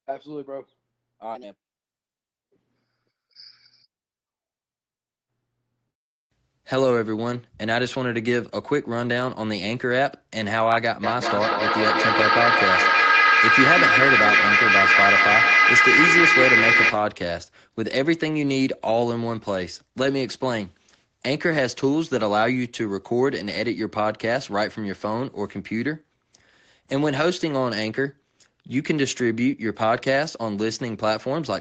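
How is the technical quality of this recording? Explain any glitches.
The recording has one clear glitch: a feedback howl from 11.03 to 17.12 s. Two devices in the same room were on the call, so the sound leaving one loudspeaker reached the other microphone and came back louder on each trip. Instead of fading, the repeats, roughly every 200 ms, narrow into a tone of around 2 kHz that peaks at about 5 dB above the speech, until the loop is broken. An acoustic echo would instead give quieter, full-band copies that die away. The call path's band limit, with nothing above 8 kHz, is present throughout.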